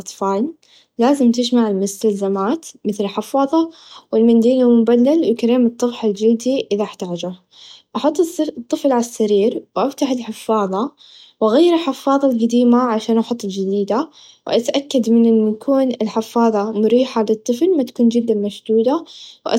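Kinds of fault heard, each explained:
Nothing stood out as wrong on listening to this speech recording.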